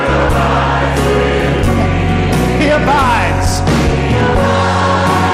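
Hard clipping runs through the whole clip: the audio is driven about 11 dB past what a stage can pass, so roughly a sixth of samples are cut flat. The abrupt flat tops give a harsh, bright fuzz on every loud moment, unlike the rounder, gentler thickening of soft saturation.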